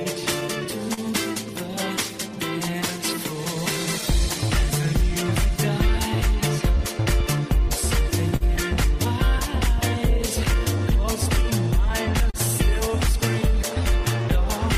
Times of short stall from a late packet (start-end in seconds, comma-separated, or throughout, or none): 8.36-8.44